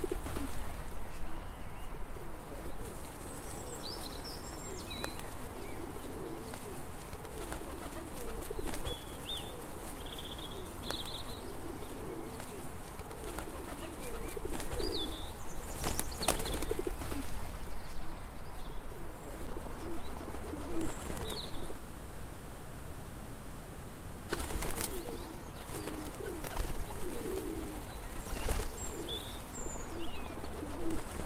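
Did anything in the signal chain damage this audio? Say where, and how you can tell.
Yes. Short concealed packet loss at the network stage: brief smears near 21.47 s (about 40 ms) and 21.73 s (about 20 ms). Packets arrived too late for the decoder. The receiver extended the preceding sound to cover each gap, then blended back into the real audio.

A long network dropout follows from 21.77 s to 24.31 s, about 2.5 s of missing audio. The receiver extends the last sound as a fading buzz or hiss, then the audio resumes further on with that stretch gone. A likely cause is a network stall.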